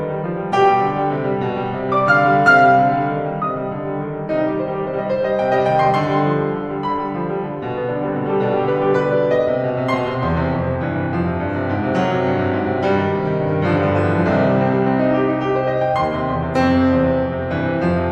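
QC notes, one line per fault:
No technical faults are audible in the music, and the signal holds steady with nothing that needs flagging for this clip.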